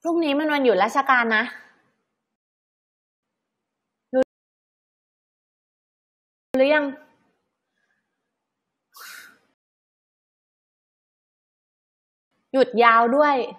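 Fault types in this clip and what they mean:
Rebuffering stall: the player ran out of buffered data and waited for more, so the speech falls silent three times, for 0.87, 2.32 and 2.77 s, then resumes where it stopped.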